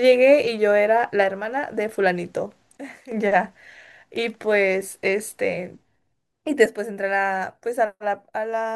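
A speech recording with two sudden gain jumps, where the level changes instantly rather than fading. From 2.77 to 3.12 s the speech and its background noise both fall by about 12 dB together, then snap back. From 6.66 s to the end the level drops by about 6 dB and stays down. The likely cause is a digital gain setting applied with no ramp between samples.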